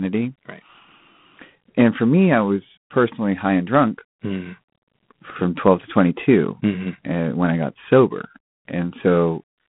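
Throughout the speech, G.726 ADPCM coding leaves a harsh, rasping hiss that swells and falls with the speech level, which fits coarse 24 kbit/s quantisation of prediction differences. A spectrogram shows a telephone band of 150 Hz to 3.4 kHz, a hard ceiling near 3.8 kHz, and level-tracking noise filling gaps between harmonics.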